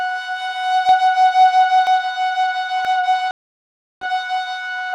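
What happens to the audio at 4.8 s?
Nothing goes wrong at 4.8 s: the music plays through that moment intact, with no dropout, click or distortion.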